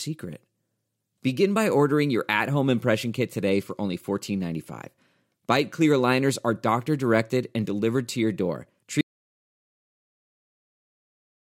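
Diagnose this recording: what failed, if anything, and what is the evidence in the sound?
An audio dropout to silence ends the speech early. Right after "delivered to your door", at 9.01 s, the sound stops dead and stays silent to the end of the clip at 11.42 s, with no room tone or noise floor left. On a waveform this is a flat line; a spectrogram goes dark. The input was likely lost at the device or link stage while the recorder kept writing silence.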